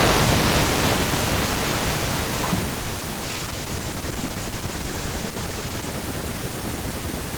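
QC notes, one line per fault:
2.81–2.92 s, short stall from a late packet: a packet arrived late and the jitter buffer emptied, so the receiver held the last sound for about 90 ms, then resumed exactly where it paused, losing nothing. The held sound stretches unnaturally with a faint buzz. The waveform shows a repeating, slightly decaying stretch. The spectrogram shows frozen, smeared horizontal bands where the harmonics stop moving, and everything after is pushed about 90 ms later.
3.00 s and 3.13 s, short concealed packet loss: two brief gaps, each about 20 ms of missing audio, were bridged by extrapolating the preceding sound and cross-fading back into real signal. Each is heard as a quick smear or wobble, and a brief consonant can drop out. On the spectrogram each shows as a narrow column where the harmonics blur or flatten. The waveform has a short, smoothed patch with a slight envelope dip.
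3.24–5.98 s, call bitrate drop: the bandwidth estimate fell and the encoder went from 32 to 15 kbps, holding the low rate for about 2.65 s. Coarser coding makes the speech rough, watery and duller, with the top end trimmed. The spectrogram shows the upper frequencies cut off abruptly across this span, with patchy, speckled detail below. The waveform looks much the same, though fine texture is reduced.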